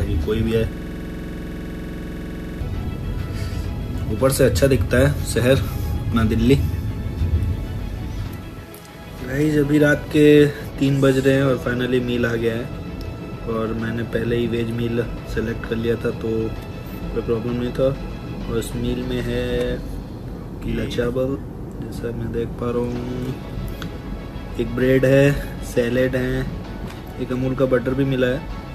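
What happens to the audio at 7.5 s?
Nothing goes wrong at 7.5 s; the audio passes through that moment intact, with no audible fault.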